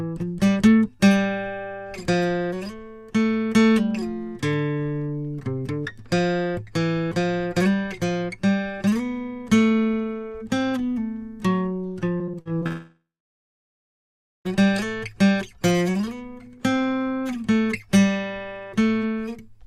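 A music recording with two faults. From 12.17 to 12.67 s there is repeated packet loss that gives a choppy, robotic sound. Six short holes, the longest 43 ms, are patched by extending the preceding sound, which covers about 28% of that half-second. From 12.67 s the music stops entirely. A brief fading continuation of the last sound leaves about 1.4 s of silence, and the music resumes at 14.47 s with roughly 1.8 s of material gone. This is likely a long network dropout.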